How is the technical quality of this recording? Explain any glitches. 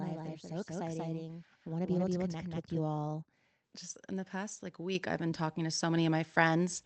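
Two glitches stand out in this speech recording, heard through a call path whose Opus coding at 20 kbps tops out around 8 kHz.

From the very start until 2.8 s there's a doubled audio track: a second full-band copy of the speech trails the original by about a fifth of a second, at roughly the same loudness. It has no reverb tail or room colour, so it sounds like a hard slapback rather than an echo, and it cuts off abruptly at 2.8 s. The likely cause is the audio being captured twice, once through a slower path.

At 4.95 s, between "in the past like" and "I've been talking", the microphone volume stepped up by about 5 dB in one jump. The call software evidently judged the mic too quiet and raised its input gain, so the voice and the background noise get louder together, mid-sentence, with no fade.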